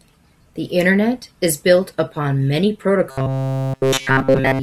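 This speech clip turns into a rigid, metallic buzz at about 133 Hz from 3.09 to 4.62 s, right after "is built upon many", with essentially all of it repeated: robotic sound from repeated short buffers, likely caused by a 7.5 ms chunk looped while real audio went missing.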